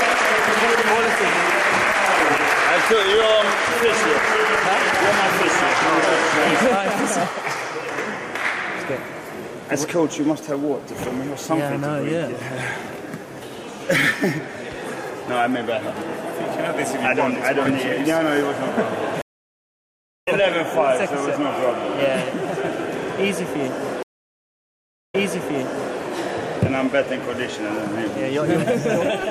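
At 19.22 s the stream drops out for about 1.05 s, and when it comes back at 20.28 s it has jumped roughly a second ahead. That's a stream reconnect: the link broke, the player sat silent, then rejoined with a fresh decoder. It happens again at 24.03 s, with about 1.11 s of silence, but this time the audio restarts 0.84 s earlier, so you hear a short stretch repeated before 25.97 s.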